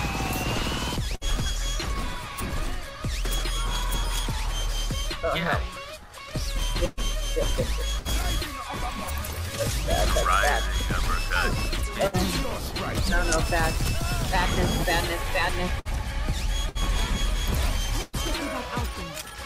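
At 1.15 s there is a burst of packet loss lasting until 1.24 s. A run of packets failed to arrive in time, and the receiver filled roughly 60 ms by extending the last sound while fading it down. This gives a brief held, decaying tail. Playback then jumps ahead, and about 60 ms of the original audio is gone. The same fault recurs from 12.07 to 12.16 s, with a similar fill of about 60 ms and an equal amount skipped.

Between 6.85 and 8.26 s there is repeated packet loss (robotic sound). Three separate holes open up in this span, the longest about 120 ms. Each is patched by stretching the preceding sound, which produces a choppy, mechanical texture with small pieces missing. About 180 ms is lost in total, roughly 13% of the stretch. The pattern returns from 15.79 to 18.64 s as five holes totalling about 240 ms. The longest is again near 120 ms, and together they cover about 8% of that span.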